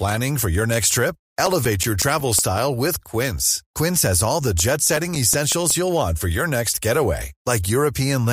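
Speech clip with CD scratch ticks at 0.91–2.94 s and 4.41–5.71 s: regular clicks about six per second, the longest about 7 ms in the first run and 4 ms in the second, where a disc blemish defeats error correction once per revolution.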